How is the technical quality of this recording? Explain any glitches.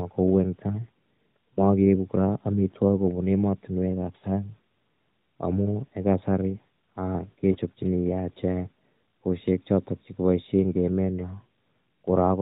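Three short dropouts break up the narrowband telephone-band speech, where nothing above 4 kHz comes through and the coding sounds fairly clean, as AMR's 12.2 kbps mode would.

At 1.54 to 1.60 s, 4.18 to 4.24 s and 7.52 to 7.57 s the speech briefly dips or warbles, then returns weak or rough for a moment. These are lost AMR speech frames. Radio errors corrupted frames, and the decoder filled each gap by repeating the last good pitch and vocal-tract settings at falling gain. The first and third gaps fit one lost 20 ms frame, and the middle one fits two, so it sounds a little longer and more smeared.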